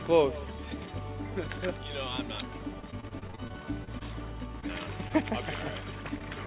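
Repeated packet loss (robotic sound) runs from 2.80 to 4.02 s: around a dozen short holes, the longest 27 ms, each patched by extending the preceding sound, so about a fifth of that stretch is synthetic fill. The result is choppy audio with roughly 220 ms missing overall. A short concealed packet loss follows at 4.60–4.64 s, where about 20 ms failed to reach the decoder in time; the receiver bridged it by continuing the last sound and blending back, heard as a brief smear or wobble. At 5.08–5.13 s a short stall from a late packet occurs: the jitter buffer ran dry, so the receiver held the current sound for about 19 ms until the packet arrived, and then resumed where it left off. Nothing is lost there, but there is a slight buzz or dip and about 8 ms of added delay. Throughout the clip, nothing is audible above 4 kHz, which fits a narrowband G.711 mu-law call path at 64 kbps.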